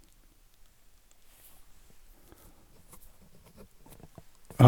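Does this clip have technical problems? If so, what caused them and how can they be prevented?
Yes: a repeated buffer at 1.12 s. New audio reached the playback device late, so it replayed its last block of about 1.5 ms once more. The block was tiny, which fits a 64-sample buffer, so the hard joins produce a brief click. Essentially no audio is lost. Larger playback buffers or higher scheduling priority for the audio thread would keep fresh data arriving on time.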